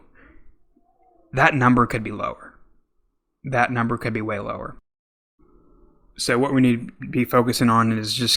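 No technical faults are audible anywhere in the recording.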